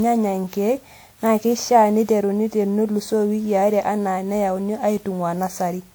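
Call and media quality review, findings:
Swirly, hollow, smeared speech throughout with blurred consonant attacks; likely generation loss from about seven WMA 1 re-encodes, each pass requantising on a shifted frame grid.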